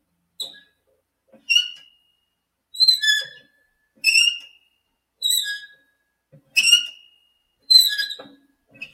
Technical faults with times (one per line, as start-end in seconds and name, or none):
none